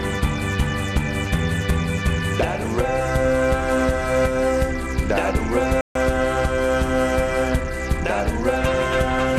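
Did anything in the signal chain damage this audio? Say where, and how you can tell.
Yes, at the playback stage. The music stops dead at 5.81 s and stays silent until 5.95 s, a gap of about 143 ms, before continuing. The likely cause is a playback stall: the player's output ran dry, either because its buffer emptied or because its thread was held up, and nothing reached the output until it caught up. Unlike a brief dropout or click, this silence is long enough to register as a clear hole in the flow.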